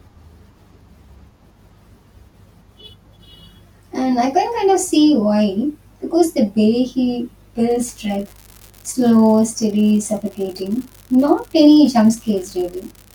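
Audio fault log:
7.68 to 13.14 s, unreliable data bit: right after "the way he", a steady crackling fizz comes in and runs to the end, pauses included. One data line's gone marginal, so that bit flips in a random share of samples, and each flip lands as an identical-sized spike.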